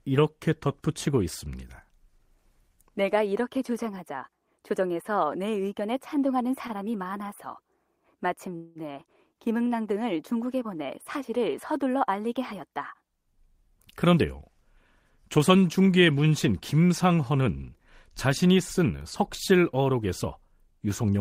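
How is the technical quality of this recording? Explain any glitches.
The recording has three kinds of network playback glitch: one short stall, one freeze, and three stretches of sped-up playback.

At 6.67 to 6.72 s there is a short stall from a late packet. A packet arrived late and the last sound was stretched by 17 ms. It is a brief held sound, far shorter than a freeze.

At 8.56 to 8.78 s there is a call audio freeze, likely from packets held up in transit. About 193 ms of fill was inserted as a fading buzz that never reaches silence. The fill is longer than the stall.

There are jitter buffer speed-ups at 13.10 to 14.77 s (104%, about 70 ms removed), 15.22 to 15.58 s (108%), and 20.67 to 21.15 s (108%), the last two each removing about 40 ms. Tiny pitch-period slices were cut to reduce the delay, so the speech runs faster while its pitch stays the same, sounding hurried in the two 108% stretches.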